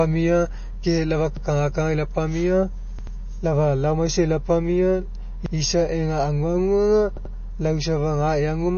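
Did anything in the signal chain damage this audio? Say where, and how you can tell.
Yes. Playback buffer: repeated buffer at 1.37 to 1.45, 2.99 to 3.16, 5.46 to 5.55 and 7.17 to 7.34 s, an 85 ms piece replayed once, twice, once, twice. It stutters, and the waveform shows identical blocks butted together with hard joins, which fits a 4096-sample buffer re-sent when new data arrived late.

Codec: the speech sounds watery and swirly throughout, likely MP3 compression at a low bitrate, around 32 kbps. A spectrogram would show a flat ceiling at 6.6 kHz and flickering gaps where weak frequency lines switch on and off between frames.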